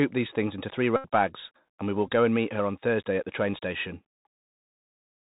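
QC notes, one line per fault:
throughout, Bluetooth CVSD headset codec: the link uses a one-bit adaptive delta coder, consistent with 64 kbps CVSD, so nothing passes above 4 kHz, s sounds turn scratchy, loud highs distort, and granular hiss underlies the speech.
0.96–1.05 s, Bluetooth headset packet repeated: between "these things into three" and "bags and we will", lost packets were filled by decoding the previous packet again, producing a steady buzz near 267 Hz for about 79 ms.
2.07 s, Bluetooth headset packet repeated: just before "go and meet her", a brief loss of about 11 ms was covered by re-decoding the last packet, which comes through as a short buzzy tick.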